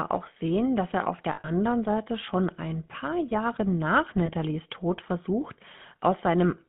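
Throughout, the speech carries the plainly audible buzzy, gravelly roughness of the GSM full-rate codec, consistent with 13 kbps GSM. Its pulse-driven vocal-tract model coarsens the excitation, and the line band runs only from 150 Hz to 3.5 kHz.

From 1.32 to 1.50 s, just after "sehen dass er auf", lost GSM frames remove about 120 ms of audio, scattered over 160 ms with the longest gap around 70 ms. Each gap is filled by repeating the last good frame, which gives a rough, metallic ring. A second, 20 ms dropout at 4.26–4.31 s produces a brief ring.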